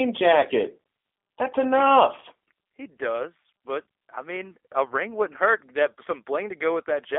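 Throughout, the speech carries G.729 codec damage: a rough, slightly synthetic texture and a narrow telephone band from 300 Hz to 3.5 kHz, which fits an 8 kbit/s G.729A stream. On a spectrogram, energy stops abruptly near 3.5 kHz, and harmonics look smeared between frames.

From 4.89 to 4.93 s, between "but I mean a" and "wouldn't hurt", VoIP packet loss concealed by the speech codec leaves a brief stretched sound that fades. This fits about 10 ms of missing audio that the decoder filled by repeating and fading its last pitch. The waveform shows a dip in amplitude there, and the spectrogram shows blurred, flattened harmonics.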